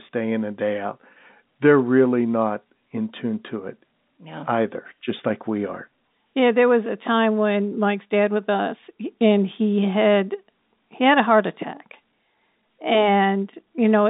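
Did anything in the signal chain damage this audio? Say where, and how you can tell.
No, nothing in the chain damages this speech; the band from 150 Hz to 3.7 kHz, with nothing above 3.8 kHz, is simply the G.711 telephone coding path doing its job, consistent with a 64 kbps A-law line.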